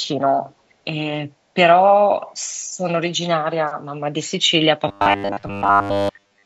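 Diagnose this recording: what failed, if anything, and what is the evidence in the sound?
A very faint delayed copy of the speech, about 438 ms late, surfaces from 0.49 to 0.54 s: likely an echo leak from a far-end echo canceller in the call processing.

From 4.88 to 6.45 s the speech becomes a rigid metallic buzz at 100 Hz, likely robotic sound from repeated short buffers at the driver or buffer stage. Roughly 10 ms chunks loop in place of most of the real audio.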